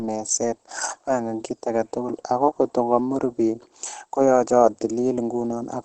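Speech runs through the whole clip with Opus compression damage that is plainly audible, most likely from the codec working in its speech-oriented SILK mode. The sound is muffled and hoarse, and nothing is present above about 8.9 kHz, which points to a wideband setting at a low rate near 16 kbps. Unlike MP3 damage, there is little swirling or watery warble from spectral holes. The harm is a dull, rasping texture across the full length.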